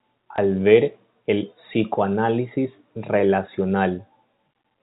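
At 0.36 s a small blip lasting about 20 ms cuts into the speech. This is packet loss with the last packet repeated: one packet of audio went missing, and the receiver filled the 20 ms gap by replaying the packet before it. Because only one packet is lost, the repeat stops before it can settle into a buzz. The speech is also band-limited to the telephone range by G.711 coding, with nothing above 4 kHz.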